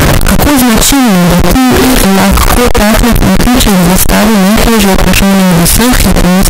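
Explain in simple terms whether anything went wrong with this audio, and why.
Something went wrong for the whole clip: the speech is extremely loud, harsh and buzzy, with background noise as loud as the talking. This points to float read as integer, likely 32-bit float samples played back as 32-bit integers, turning each wave into near-square blocks.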